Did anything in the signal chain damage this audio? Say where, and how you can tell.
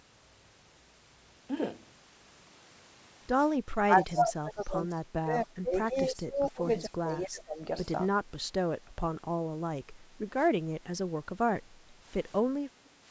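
Yes. From 3.62 to 6.64 s and again from 6.82 to 7.7 s, the speech dips, falling by roughly 30 dB and then roughly 25 dB. This is likely speech suppressed in double talk: in the call processing, the echo canceller mistook the local talker for loudspeaker echo and attenuated both.

Near the end, the room sound dips by about 8 dB from 9.84 to 10.19 s, then by about 6 dB from 11.64 to 11.97 s and from 12.74 to 13.04 s. Each time it recovers afterwards. This is background gated by the echo canceller, again in the call processing stage; the call microphone filtering, which limits the band to 8 kHz, is working normally.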